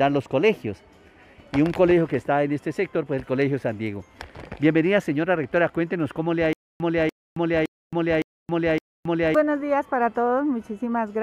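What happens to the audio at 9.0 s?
At 9.0 s the audio is in a stutter with silent gaps, running from 6.53 to 9.35 s. A 292 ms fragment repeats five times, each followed by 271 ms of digital silence. A stalled stream, replaying its last chunk on each retry, is the likely cause.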